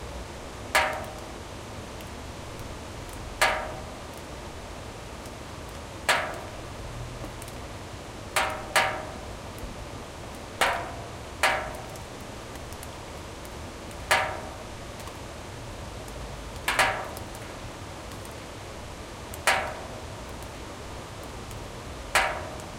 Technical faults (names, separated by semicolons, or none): none